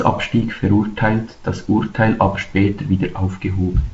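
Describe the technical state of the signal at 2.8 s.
At 2.8 s the signal is intact, with nothing beyond the light wideband hiss and the loss of content above about 7.7 kHz that come from its G.722 telephone coding at 48 kbit/s.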